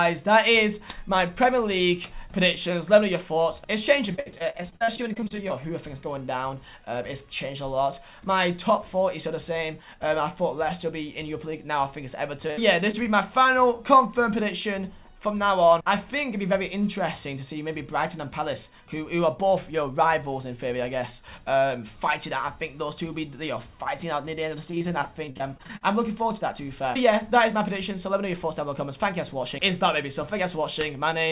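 From 4.12 to 5.52 s the sound turns choppy, with pieces dropping out. This is repeated packet loss: audio kept arriving too late or not at all, and each hole, the longest about 60 ms, was patched by extending the last sound. Nearly a third of that stretch is patched rather than real. A shorter burst of the same fault roughens 12.47 to 13.07 s, where about a fifth is filled, with one gap near 63 ms.

From 13.43 to 13.47 s comes a brief smear or wobble, where a short consonant-like moment can drop away. This is short concealed packet loss: 20 ms of audio never reached the decoder in time, so the receiver continued the preceding sound and blended back into the real signal.

From 24.71 to 25.83 s the choppiness of repeated packet loss returns, with about a quarter of the span concealed and gaps up to about 43 ms. Throughout the clip the G.711 A-law call path leaves nothing above 4 kHz.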